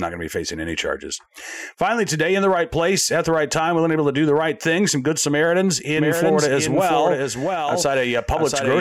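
A second, late copy of the signal is likely being mixed back in, perhaps through a slower capture path running alongside the main one. From 5.97 s to the end, this doubled audio track puts a full-band duplicate of the speech roughly 0.7 s behind the original, a few decibels quieter. It sounds like a dry, distinct repeat with no reverberant tail or room colouring, and it cuts in abruptly at 5.97 s.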